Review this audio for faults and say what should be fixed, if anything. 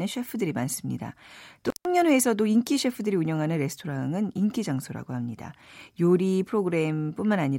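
An intermittent contact opens the signal path from 1.67 to 1.85 s, cutting the speech out for about 150 ms. A loose cable or plug briefly losing connection leaves crackle at both edges and faint hiss during the gap, unlike a digital dropout's clean, silent break. Reseat or replace the suspect cable and connectors, and secure them so they cannot shift during recording.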